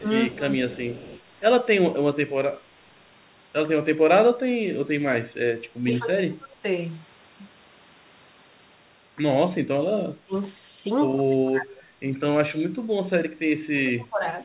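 The speech dips at 0.0, from 0.3 to 0.83 s, 4.23 to 4.93 s, 5.84 to 6.63 s, at 10.3 s, from 11.15 to 12.05 s and from 13.46 to 14.25 s. The drops range from about 10 dB early on to about 30 dB at the end. This is speech suppressed in double talk, likely an echo canceller ducking the near talker while the far side spoke.

From 0.74 to 1.21 s, overlapping the second dip, a faint copy of the voice trails 133 ms behind, roughly 20 dB down. This is an echo leak, likely loudspeaker pickup the canceller failed to remove. Its fixed delay sets it apart from room reverberation, which smears continuously rather than repeating.

Throughout, the G.711 A-law call path leaves nothing above 4 kHz, which fits a 64 kbps telephone-band link.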